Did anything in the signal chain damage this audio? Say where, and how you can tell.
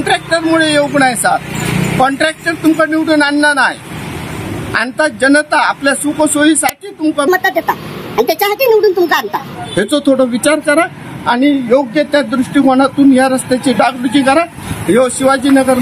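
Yes. Gain pumping runs throughout: the level ducks by roughly 15 dB under loud moments, likely a fast limiter fighting far too much input gain.

At 6.69 s there's an uninitialised buffer, a 5 ms loud crack where the driver played a block before any audio was written.

From 7.28 to 9.55 s there's a section at the wrong speed, running 1.34 times fast and about five semitones sharp, likely resampled to the wrong clock during playback or editing.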